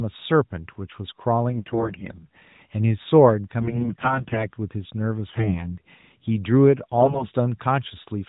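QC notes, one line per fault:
1.50–2.28 s, 3.60–4.49 s, 5.28–5.78 s, 6.96–7.27 s: AMR bit errors. Corrupted codec frames misplace excitation pulses and skew pitch, gain and spectral values, so the speech turns hoarse and gargly at unchanged level, worst at 3.60–4.49 s. The spectrogram shows harmonics breaking into noisy smear below 4 kHz, and the waveform looks ragged but keeps its level.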